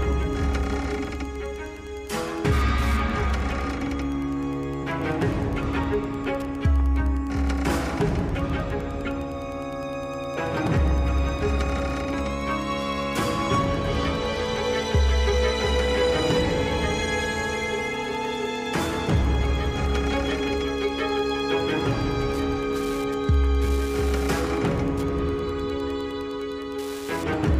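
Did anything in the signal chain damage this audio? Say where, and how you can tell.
Yes. Wi-Fi interference affects the analogue wiring for the whole clip. A steady ticking repeats every 102.4 ms, about ten times a second, sitting about 30 dB below the sound. A nearby Wi-Fi radio's beacon bursts are being rectified by the audio circuit and heard as clicks.

Compressed frames skipped at 4.82 s and 10.36 s, at the codec or storage stage. At each the audio jumps forward. The first loses about 30 ms, the second about 70 ms. That fits one and then about three frames of roughly 26 ms each.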